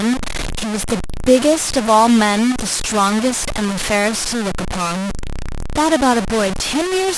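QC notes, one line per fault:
Throughout: low bit depth without dither. The speech sounds coarse and grainy all the way through, with a rough buzz that rises and falls with the talker rather than sitting underneath as a steady hiss. The distortion is nearly as loud as the speech itself, and quiet tails and breath drop out or sputter. That points to the audio likely being truncated to about 4 bits with no dither, so the rounding error follows the signal.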